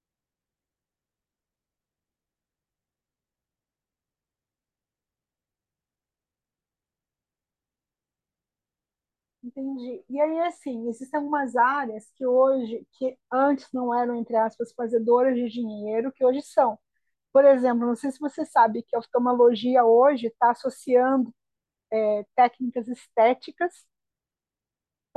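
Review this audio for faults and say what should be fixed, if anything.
Nothing to fix: no faults are audible anywhere in the speech.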